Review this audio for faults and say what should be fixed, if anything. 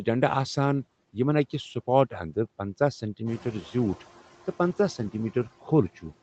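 Noise suppressor artifacts run through the whole clip. The suppressor pulls down whatever bands it judges to be steady noise by about 15 dB, frame by frame, so the background dips in pauses and swells under the speech. A gentler reduction depth or smoother per-band gain changes would prevent this.

Noise suppressor catching up appears from 3.26 to 3.98 s, right after "اند پنژاہ". The room noise jumps by about 13 dB around the middle of the clip. The suppressor's noise estimate lags, so the louder noise passes with only about 9 dB of reduction for roughly 720 ms before it settles down. Faster noise-estimate tracking for sudden level increases would prevent this.

The top end stops at 8 kHz, which is consistent with the Opus call path.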